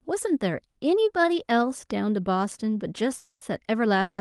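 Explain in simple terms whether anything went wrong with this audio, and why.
Twice the incoming audio was likely held up on its way, giving a call audio freeze at 3.17 to 3.43 s and again at 4.01 to 4.20 s. Each time the last sound stretches into a fading buzz (briefly silent the first time); after the first, the speech carries on late, with nothing lost.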